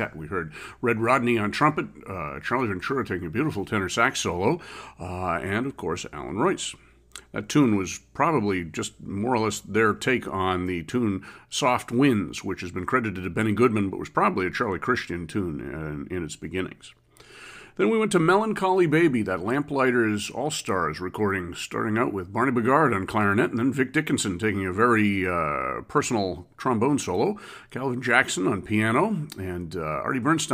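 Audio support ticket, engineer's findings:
No fault found in the speech recording. Nothing to escalate on this ticket.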